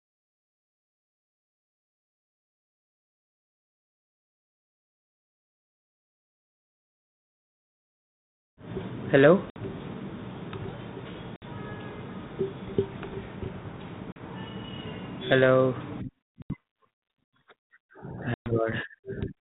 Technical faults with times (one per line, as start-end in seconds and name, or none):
9.50-9.57 packet loss on an ADPCM call
11.36-11.45 packet loss on an ADPCM call
14.12-14.20 packet loss on an ADPCM call
16.42-16.55 packet loss on an ADPCM call
18.34-18.52 packet loss on an ADPCM call